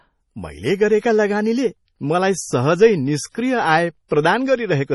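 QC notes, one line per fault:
Throughout: MP3 compression. The speech has nothing above about 11.4 kHz, a hard treble ceiling rather than a gentle roll-off. The damage is heavy. The sound is watery and swirly, and s sounds turn metallic and chirpy. Weak frequency lines drop in and out from frame to frame because the encoder cannot afford to keep them. The fixed cut-off and the level of damage point to a very low bitrate, around 32 kbps. MP3 encoding is the likely cause.
4.08 to 4.11 s: pre-echo. A short hiss runs ahead of a sharp attack for about 26 ms. The attack itself sounds soft and smeared. The codec spreads its quantisation noise across a whole block. This attack falls late in its block, so noise sized for the loud part leaks into the quiet moment before it. The starved bitrate makes the leaked noise coarse enough to hear.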